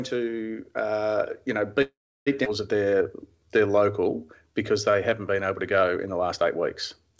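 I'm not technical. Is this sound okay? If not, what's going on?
No. There are three problems, all close together.

Call audio freeze, from 1.82 to 2.28 seconds: the speech stops for almost half a second. It trails off briefly and then goes silent for about a third of a second before carrying on where it left off. The likely cause is that the call's data was held up in transit and the receiving side ran out of audio to play, so it had to wait. Nothing is lost, but a pause that wasn't in the original speech is added.

Skip ahead, at about 2.44 to 2.48 seconds: the opposite happens. Roughly a third of a second of speech is missing, and the audio jumps straight from one point to a later one with almost no gap between them. That stretch was dropped on the way or thrown away by the receiver, and the two sides of the cut are joined nearly directly.

Jitter buffer slow-down, from 2.78 to 5.11 seconds: the speech runs at about 89% of its normal speed but keeps the same pitch, so sounds are drawn out. 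The receiver was rebuilding its reserve of audio by repeating tiny slices of the sound many times in a row, which adds about a quarter of a second over that stretch. The call's audio format also drops everything above 8 kHz, so very high sounds are missing throughout.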